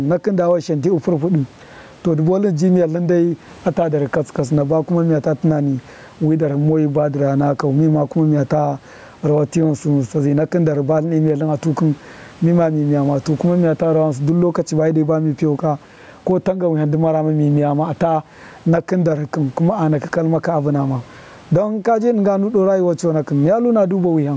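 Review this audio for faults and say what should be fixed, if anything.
Gain pumping throughout: gain ducking about 15 dB under loud syllables, likely excess gain driving a fast limiter; loud and soft parts sit closer in level. Lowering the microphone input gain so the limiter seldom engages would prevent it.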